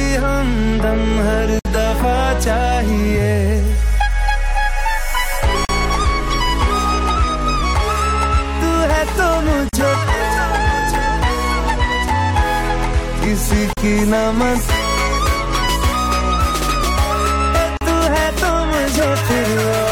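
Five short dropouts, at 1.59 s (59 ms), then 5.65, 9.69, 13.73 and 17.77 s (40 ms each), spaced 4 s apart. That's a gap at a join of encoded pieces: separately encoded chunks kept their encoder delay and end padding, leaving silences with smeared edges.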